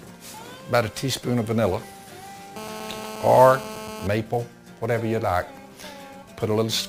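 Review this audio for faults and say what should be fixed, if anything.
There's sample clock jitter running the whole length of the clip. The converter's clock wobbles, on the order of 10 microseconds RMS, so each sample lands a touch early or late and picks up an error that scales with how steep the waveform is. That leaves a hiss or roughness around 20 dB below the signal, climbing on loud and bright passages and dropping out in silence. Clocking the converter from a clean, stable reference, or a better interface, would fix it.

From 2.56 s to 4.07 s you get a GSM phone buzz. A 2G handset nearby is on a call and transmitting in bursts at about 217 Hz, and something in the audio chain is rectifying those radio pulses. What you hear is a hard, raspy buzz at 217 Hz with a stack of harmonics, about 11 dB below the signal and with no relation to the programme. Keep phones well away from the rig, or off, while recording.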